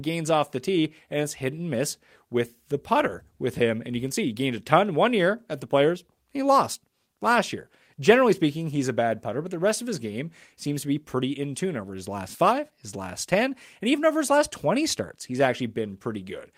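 No audible technical faults.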